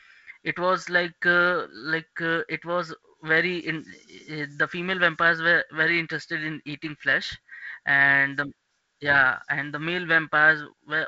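No faults in this speech; it is G.722 wideband telephone coding, with a band limit near 7.7 kHz, light hiss in the upper band and a slightly noisier lower band consistent with the 48 kbit/s mode.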